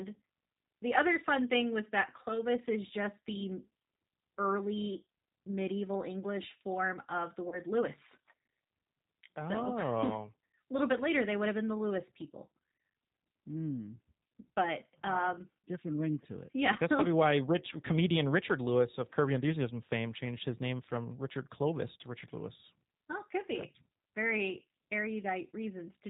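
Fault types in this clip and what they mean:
G.729 codec, throughout: speech is rebuilt at 8 kbit/s from a vocal tract filter and a few pulses, so everything above 4 kHz is gone and the voice sounds plainly rough and synthetic.
VoIP packet loss concealed by the speech codec, at 7.49 to 7.60 s after "form of the" and at 12.77 to 12.80 s: a lost 30 ms packet is filled by extrapolating the last pitch and filter, giving a brief stretched, fading stretch.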